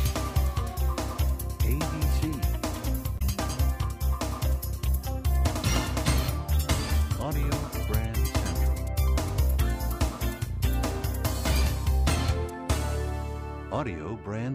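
Damaged data in a compressed stream appears from 3.15 to 3.22 s, a brief burst of about 70 ms. At that point the encoded bytes no longer make sense to the decoder: some were lost, blanked or overwritten, so the frames there are misread or thrown away while it loses sync and hunts for the next valid frame header. The result is a short chirp, squawk, click or hole that cuts abruptly across the surrounding sound.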